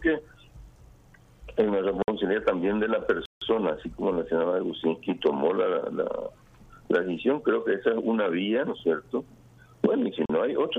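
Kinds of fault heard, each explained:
Block of digital silence: three abrupt holes of 55, 160 and 40 ms, where the sound dropped straight to silence.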